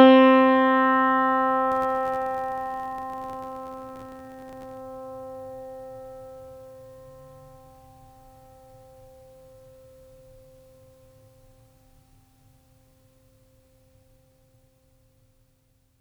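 From 1.72 to 4.79 s the music picks up a filter restarted on every block fault: a filter in the chain discards its internal state at each block boundary and starts from zero, so every block opens with a small transient. The result is a steady buzz at 86.1 Hz, which fits a 512-sample buffer, rising and falling with the music's level.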